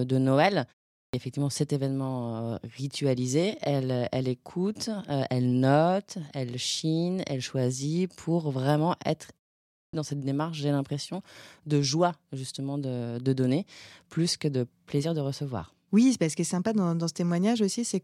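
At 0.95 s, after a 0.3 s pause, there is a clipped start after a pause. The output has dozed off and wakes late. About 185 ms is lost, so "est effectivement cet événement" begins abruptly. At 9.73 s, after "choisit pour vraiment être" and a 0.42 s gap, about 204 ms vanishes before "dans cette démarche j'ai".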